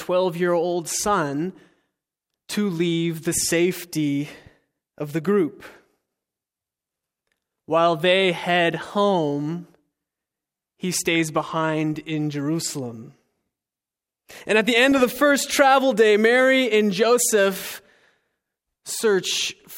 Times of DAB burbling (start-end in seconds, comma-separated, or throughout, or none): 11.15, 14.92-15.12